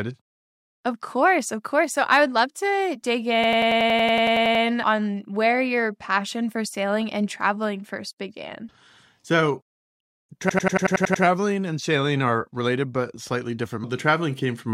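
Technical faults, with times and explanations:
3.44–4.64 s and 10.50–11.24 s, system hang loop: the driver stalls while the hardware keeps replaying one ring buffer, so a 93 ms slice repeats 13 and then 8 times, which fits a 4096-sample buffer. This produces a machine-gun stutter at about 10.8 Hz after "would love to dig" and before "and sailing are related", with speech resuming intact.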